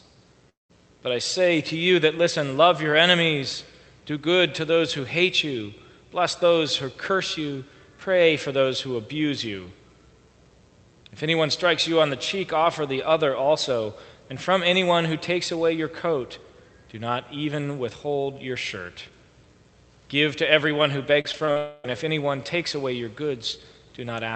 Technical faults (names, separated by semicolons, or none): long network dropout; repeated packet loss (robotic sound)